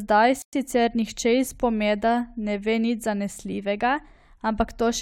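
At 0.42 s the speech drops to silence for about 0.11 s before resuming at 0.53 s, a Bluetooth stall, likely from interference delaying packets until the headphones' buffer ran empty.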